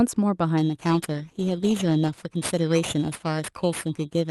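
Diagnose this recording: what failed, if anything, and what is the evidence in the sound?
Two things went wrong, and the first is periodic clock jitter at the converter stage. From 0.57 s right to the end, the speech picks up a rough, metallic edge that drops away in the gaps between phrases. That's the signature of the sample clock being wobbled by interference at a fixed rate, somewhere around 4 kHz. Each component of the speech grows sidebands at that spacing, and the brighter consonants get hit hardest.

The second is a call bitrate drop at the codec and network stage. Between 0.9 and 2.27 s the speech turns coarse and watery and loses some top end, then cleans up again. The worst of it lasts about 1.3 s. That fits the bandwidth estimate collapsing and Opus being told to go from 48 kbps down to roughly 17 kbps, so it codes much more crudely and trims the highs. Outside that window the call path's normal 12 kHz bandwidth comes back.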